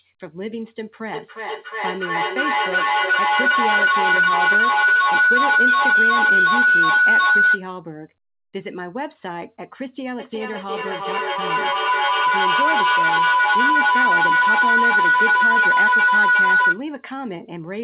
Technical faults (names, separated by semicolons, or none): feedback howl